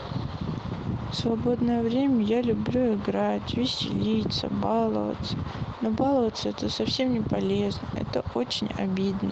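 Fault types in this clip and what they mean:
Lost packet rebuilt from error correction: At 4.15 to 4.21 s the speech turns briefly rougher and noisier without any gap. A short stretch, about 40 ms, was lost in transit. It was filled from a low-bitrate backup copy carried in the next packet.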